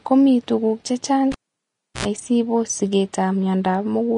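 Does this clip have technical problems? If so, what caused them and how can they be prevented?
Yes. Throughout, the speech sounds plainly grainy and hissy, with nothing above 10.6 kHz. This is likely Vorbis compression at a low bitrate, around 34 kbps, which quantises the treble into noise. A spectrogram shows a hard ceiling at 10.6 kHz above speckled, smeared high bands. Encoding at a higher quality setting prevents this.

After "ko mii tuguk chechang'", a pop at 1.32 s begins a cable pulled and plugged in. About 0.69 s of near silence follows, including 77 ms of 60 Hz mains buzz while only the tip touched. A second pop comes at 2.06 s, before "sibos sigeet". The waveform shows two spikes around a flat gap. Securing connectors and muting before replugging prevents this.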